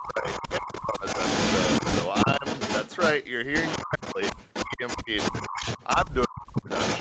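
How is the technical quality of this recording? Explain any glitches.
The recording has two clear problems. A delayed echo runs through the whole clip, and the talker's level repeatedly collapses for short stretches. Above both, the sound ends at 8 kHz, as a call path narrows it.

Echo leak runs from start to finish. A second copy of the talker arrives about 0.3 s behind the original. It is roughly as loud as the direct sound. This is likely echo leak. The far end had its loudspeaker on, and its echo canceller failed to remove what its microphone picked up. That audio came straight back. The result is a doubled quality.

The talker's level drops at 0.00–0.26 s, 0.59–1.04 s, 2.25–2.45 s, 3.83–4.17 s, 4.65–5.34 s and 6.05–6.68 s. The first three dips are mild, around 10 to 15 dB. The last three are deep, up to about 40 dB, and the sound nearly vanishes. The likely cause is speech suppressed in double talk. 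Both sides spoke at once. The echo canceller could not tell the talker from the returning echo, so it turned everything down.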